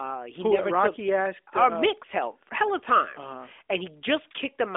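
Nothing goes wrong anywhere in this one; it simply has the narrow, phone-like band of an AMR narrowband mobile call, with nothing above about 3.8 kHz, which is just how that kind of line sounds.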